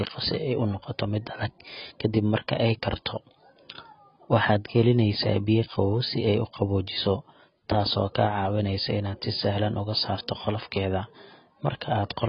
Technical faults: AAC compression

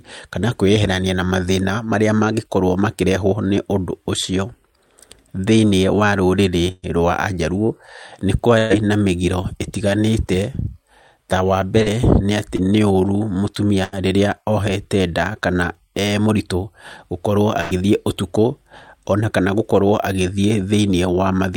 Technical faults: burst of packet loss; short concealed packet loss

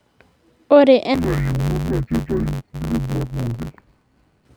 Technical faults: interleaved audio read as planar

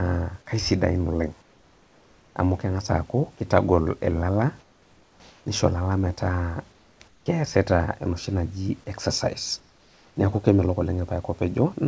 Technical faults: comfort noise in place of the background; sound dropped by the voice detector

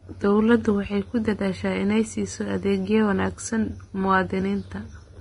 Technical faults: Vorbis compression

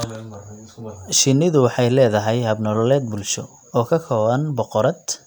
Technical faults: none

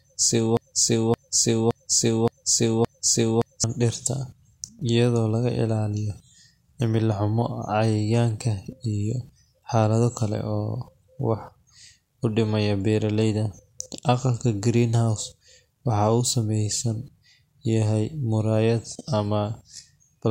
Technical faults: broken-record loop

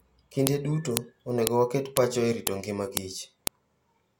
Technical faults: file header played as audio

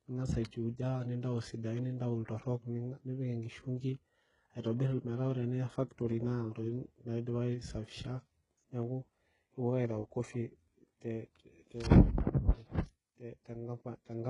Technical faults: HE-AAC compression

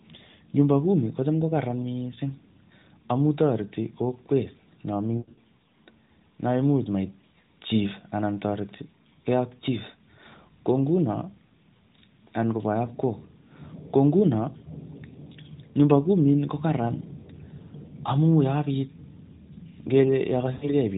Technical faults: lost AMR speech frames

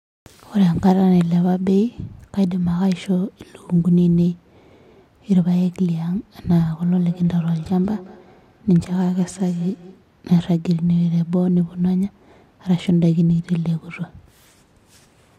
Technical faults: feedback echo between two devices

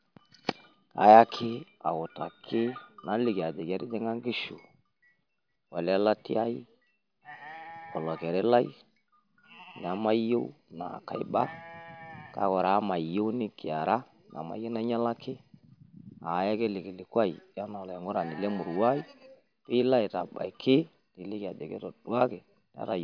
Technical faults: none

